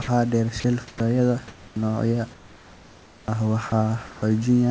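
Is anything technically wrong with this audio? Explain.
Yes. The speech suffers voice-detector errors. Between 0.02 and 0.08 s there is sound dropped by the voice detector: the sender likely judged the opening as background and stopped transmitting, so about 60 ms of speech is replaced by comfort noise.

From 0.60 to 1.76 s and again from 2.34 to 4.22 s, the sound is chopped by the voice detector, likely because transmission toggled on and off repeatedly. About 440 ms and 1.12 s respectively become synthetic comfort noise, so syllables break up. The background is otherwise quiet room noise about 27 dB below the speech, within G.722's 8 kHz band limit.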